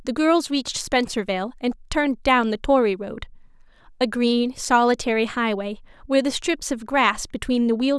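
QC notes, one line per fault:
Nothing stood out on listening to the speech.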